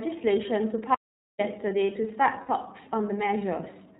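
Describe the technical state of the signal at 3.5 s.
At 3.5 s the speech carries iLBC codec damage, as it does throughout: band-limited at 4 kHz, each 30 ms frame coded independently, sounding rough and synthetic, with a spectrogram empty above 4 kHz.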